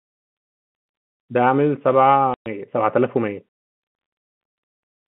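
At 2.34 s the speech drops out for 120 ms, back at 2.46 s: packet loss filled with silence. The receiver played dead air for the missing stretch, which fits six 20 ms packets, and the gap has hard edges against the narrow telephone-band sound around it.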